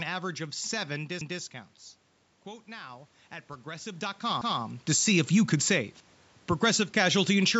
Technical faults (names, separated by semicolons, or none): overlapping chunks; automatic gain rising